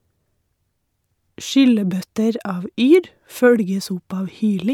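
No audible technical faults.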